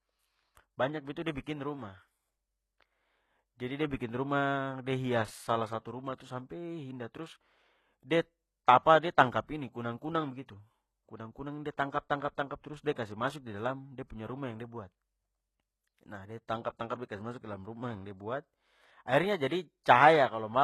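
HE-AAC compression runs throughout this speech clip: the treble, empty above 12.3 kHz, is likely rebuilt from copied lower bands, so s sounds turn gritty and metallic, consistent with roughly 16 kbps.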